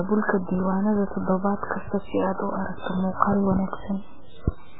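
MP3 compression damage runs through the whole speech clip: nothing remains above 3.8 kHz, and the heavy watery swirl points to a very low bitrate, likely around 8 kbps.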